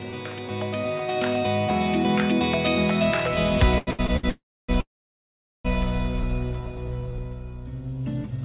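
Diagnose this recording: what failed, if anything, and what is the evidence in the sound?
Network and jitter-buffer trouble on the call path, three kinds of it. Everything's band-limited to 4 kHz, which fits G.711 A-law at 64 kbps.

Repeated stalls (stutter) first, between 3.78 and 4.25 s. You get four little hitches where the sound hangs on itself, the longest about 89 ms, adding up to roughly a quarter second of filler over a span that's more than half concealment. Packets were trickling in slower than playout, so the jitter buffer kept running dry and the receiver stretched the last bit of sound each time. Nothing's lost, it just drags.

Then two call audio freezes, at 4.29 to 4.71 s and 4.81 to 5.67 s. Each one holds the last sound briefly, then fades out, with about 0.27 s of silence in the first and about 0.79 s in the second. The gaps are roughly 0.39 s and 0.84 s in total. The audio picks up exactly where it stopped, so time's been inserted, not content dropped. 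The likely cause is packets held up in the network long enough to empty the buffer outright.

Last, a jitter buffer slow-down from 6.23 to 7.25 s. The pitch stays put but things play at about 95% speed, with sounds slightly drawn out, adding around 61 ms. That's the buffer rebuilding its reserve by repeating single pitch periods and slivers of pauses over and over.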